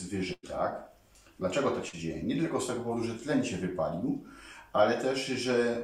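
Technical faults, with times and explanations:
0.33–0.45 s, burst of packet loss: about 100 ms never arrived, so the receiver stretched the preceding sound and faded it before resuming later, dropping that stretch.
1.89–1.95 s, short concealed packet loss: roughly 40 ms went missing, and the decoder patched the hole by extending the last sound, leaving a brief smear before blending back.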